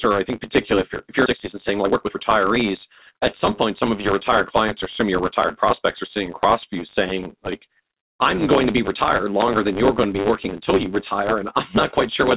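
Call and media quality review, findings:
Block size mismatch (truncated), throughout: steady buzz at 100 Hz, sound running 1.09x fast at about normal pitch. Probable component: a block handoff between processing stages. The upstream stage writes blocks about 9% longer than the downstream stage reads, so each block's tail is discarded a hundred times per second. Those repeated cuts cause the buzz and the shortened duration. Band limit at 4 kHz from the G.711 mu-law call path audible throughout.

Skip ahead, 1.26–1.28 s: abrupt forward jump right after "if you're if you're", with no gap filled. Roughly a second of sound is missing, and the two sides are joined almost directly. Probable component: the jitter buffer. It overflowed while later audio was already queued, and it dropped the backlog to catch up, cutting delay by about a second.

Jitter buffer speed-up, 1.30–3.45 s: sound plays at 117% speed with pitch unchanged and comes across as hurried. 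Probable component: jitter buffer time compression. The buffer still held more than its target after the skip, so the receiver repeatedly removed short pitch-period-sized segments. Roughly 0.4 s was removed over this span to bring latency down.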